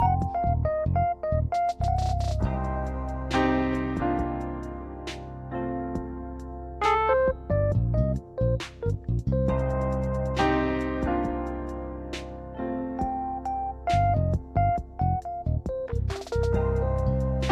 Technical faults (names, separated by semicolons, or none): none